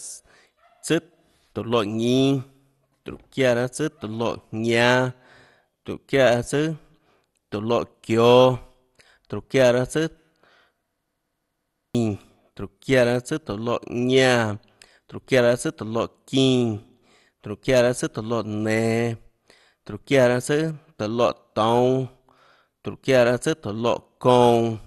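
Speech, with two faults. Throughout, the sound is dull and gurgling, with nothing above 12.2 kHz. Upper bands flicker in and out, and what remains is coarsely quantised. This is likely MP2 compression at a low bitrate, around 64 kbps, which starves whole sub-bands of bits. From 11.09 to 11.95 s there is a system hang loop. One 0.17 s slice of audio repeats exactly, about five times, giving a machine-gun stutter at 5.9 Hz. That length fits an 8192-sample buffer that kept cycling while the system froze. Roughly a second of audio is lost.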